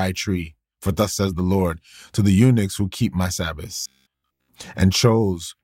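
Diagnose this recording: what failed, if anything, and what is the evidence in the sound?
Robotic sound from repeated short buffers, at the driver or buffer stage. After "eunuchs who keep my", from 3.81 to 4.49 s, the speech turns into a rigid, metallic 66.7 Hz buzz. That pitch fits a 15 ms segment being replayed. Most of the real audio there is skipped, likely because new data arrived too late.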